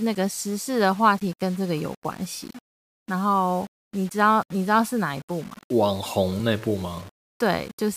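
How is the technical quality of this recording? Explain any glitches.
Technical quality is poor: a grainy distortion runs through the whole speech clip.

Low bit depth without dither, present throughout: the audio is likely reduced to about 7 bits and rounded with no dither. Because the rounding error tracks the signal itself, it sits only around 25 dB below the speech and changes character with it, so quieter syllables and decays turn gritty and buzzy, and the softest moments collapse toward silence or sputter between neighbouring levels.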